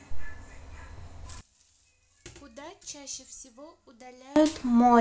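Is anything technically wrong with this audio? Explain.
Yes. From 1.41 to 4.36 s the speech collapses by about 22 dB into a faint residue. The likely cause is one channel inverted, cancelling the shared centre content when summed to mono. The waveform visibly shrinks there.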